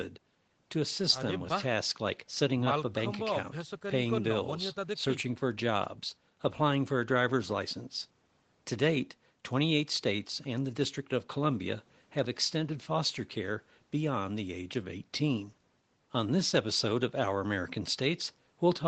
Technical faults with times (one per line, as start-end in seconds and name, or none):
none